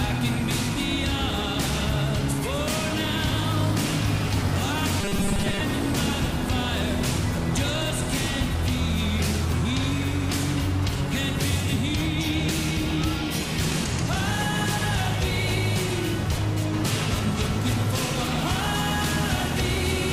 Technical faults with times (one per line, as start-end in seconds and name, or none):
5.01-5.60 robotic sound from repeated short buffers